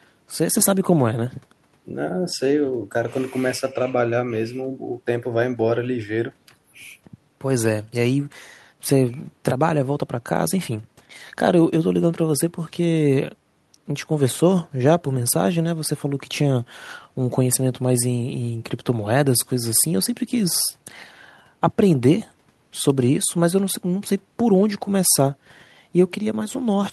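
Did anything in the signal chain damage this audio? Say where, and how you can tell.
No, nothing in the signal chain damaged this audio.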